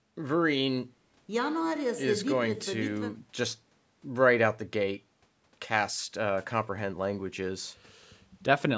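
There are no technical faults to describe in this speech; its band ending at 8 kHz simply comes from the call microphone processing working as intended.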